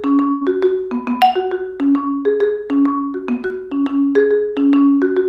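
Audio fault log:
0.31 to 0.45 s, burst of packet loss: about 100 ms never arrived, so the receiver stretched the last sound into a fading fill before resuming further on.
3.46 to 3.52 s, short concealed packet loss: roughly 40 ms went missing and was patched by continuing the preceding sound, leaving a brief smear before blending back.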